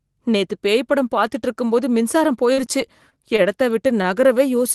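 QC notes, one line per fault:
2.53–3.40 s, repeated packet loss (robotic sound): four holes in the stream, the longest about 38 ms, were each patched by carrying the last sound forward, about 84 ms of fill in all with some 40 ms of speech gone, so the stretch turns choppy and robotic.
4.02 s, short stall from a late packet: a packet arrived about 22 ms late, the jitter buffer ran dry, and the receiver held the previous sound for roughly 22 ms before resuming where it left off, so nothing is lost but a sound is briefly drawn out.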